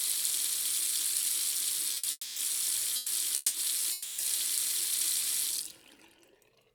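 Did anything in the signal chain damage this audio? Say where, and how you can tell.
Yes. The damage happened at the network and jitter-buffer stage. Two short stalls from late packets run back to back at 1.94–1.98 s and 1.98–2.05 s. The last sound is stretched by 20 ms and then 50 ms, and nothing is lost. On a spectrogram the frame smears horizontally into flat, repeated bands before the sound resumes.

Four call audio freezes follow, at 2.11–2.38 s, 2.96–3.08 s, 3.36–3.56 s and 3.92–4.20 s. They put 250, 100, 180 and 260 ms of filler into the timeline. The likely cause is packets held up in transit, which drained the jitter buffer. The waveform shows a fading buzz in each gap, dropping to flat silence for about 30 ms in the first and about 10 ms in the third. The sound then carries on where it stopped.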